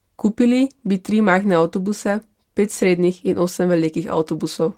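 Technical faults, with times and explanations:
No technical faults can be heard in this speech recording. Nothing in the audio marks a fault at any point.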